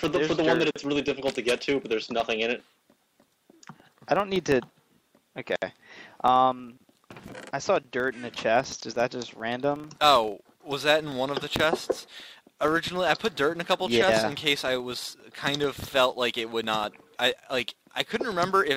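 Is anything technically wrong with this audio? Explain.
Yes. A filter restarted on every block runs through the whole clip. The filter loses its stored state at each block boundary and begins again from silence. That restart throws a small transient at the start of every block. The blocks arrive 25 times a second, which fits blocks about 40 ms long. The result is a steady 25 Hz buzz of ticks. It grows louder and quieter with the level of the sound.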